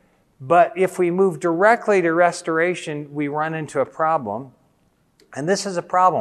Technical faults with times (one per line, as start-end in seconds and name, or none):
none